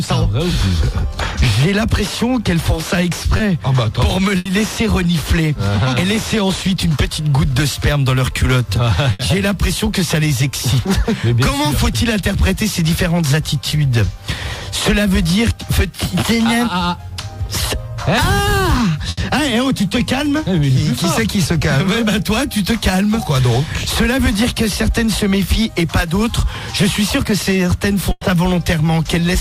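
The audio has two kinds of network fault. Short concealed packet loss occurs at 3.37 s and 13.69 s. Each time, about 20 ms of audio never arrived, and the receiver covered it by carrying the preceding sound forward before blending back into the real signal. What separates these from the longer dropouts is that each is only a brief smear or wobble. There is no audible fade, and the audio picks up again almost where it left off.

A burst of packet loss occurs four times: at 4.37 s (80 ms filled), 9.13 s (60 ms), 19.09 s (80 ms) and 28.11 s (100 ms). At 28.11 s the fill is also followed by about 20 ms of silence. In each case an equal stretch of the real audio is gone. The receiver stretched the last sound into a held tone or hiss that fades as the gap lengthens, then resumed further on. That audible fade, together with the jump past the missing material, marks these as bursts rather than the short concealed losses.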